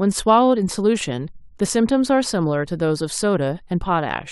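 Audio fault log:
No faults can be heard anywhere in the speech. There is nothing here that calls for a timed entry in the log.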